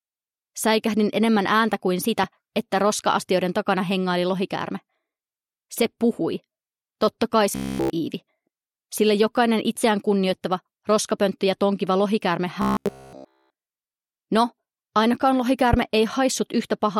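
A sharp single pop cuts across the sound from 2.24 to 2.26 s, peaking about 10 dB above the surrounding audio while the sound carries on beneath it. Another, stronger pop, roughly 15 dB over the signal, lands at 15.73 to 15.76 s. Both are loud pops, each likely a brief voltage spike from a switch, plug contact, static discharge or driver glitch that was added straight onto the signal path.

Between those pops, from 7.52 to 7.90 s and again from 12.62 to 13.50 s, the sound collapses into a rigid, metallic buzz at 66.8 Hz that only loosely follows the underlying audio. This is robotic sound from repeated short buffers. Fresh audio likely stopped arriving in time, so the playback chain looped the last fragment of about 15 ms over and over, essentially replacing all of the real audio. That loop length imposes the fixed buzz pitch, which fits a buffer of about 15 ms.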